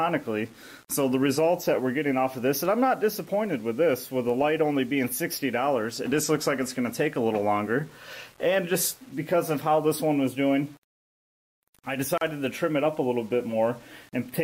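From start to finish the audio carries low bit depth without dither, most likely a reduction to around 7 bits by plain rounding. With so few levels and no dither to decorrelate the error, the quantization error tracks the waveform, so it sounds like grainy distortion that shifts with the material. The roughness sits around 30 dB below the signal. Quiet passages turn gritty, and the softest moments break up or sputter between adjacent steps.

At 12.18 s a gap at a join of encoded pieces cuts the sound for about 37 ms, until 12.21 s. Two separately encoded segments were butted together without trimming the encoder's start-up delay and the padding in the final frame, so that dead space stays in the stream. The dropout has smeared edges, and the sound resumes exactly where it left off.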